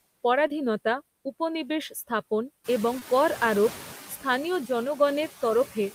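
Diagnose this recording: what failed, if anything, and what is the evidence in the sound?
Noise suppressor artifacts run through the whole clip, in the call-processing stage. The background is pulled down by about 12 dB, frame by frame, so it dips between phrases and swells under the speech.

There's short concealed packet loss in two spots, at 0.47 to 0.51 s and again at 2.99 to 3.03 s. Each is roughly a 20 ms hole from the network that the receiver's decoder papered over by extending the previous sound and then crossfading back, which gives a quick smear or wobble.

Then you've got the noise suppressor catching up. When the room noise jumps by about 14 dB around 2.5 s, the suppressor's noise estimate lags. From 2.64 to 3.99 s, about 1.35 s, the noise comes through with only about 6 dB of reduction before it sinks back down.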